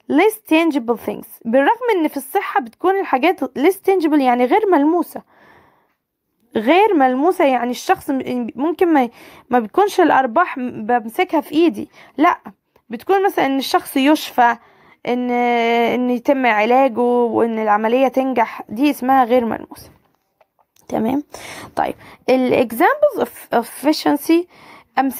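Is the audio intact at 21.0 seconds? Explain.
Yes, the audio is intact at 21.0 seconds, with no dropout, click, distortion or other fault to be heard at that point.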